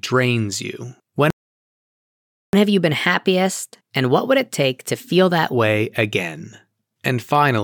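At 1.30 s the speech halts for 1.23 s in a playback stall, likely a starved buffer. From 2.53 to 5.53 s, catch-up at higher speed runs the speech 1.15 times fast with pitch raised about two semitones, unlike pitch-preserving time-stretching.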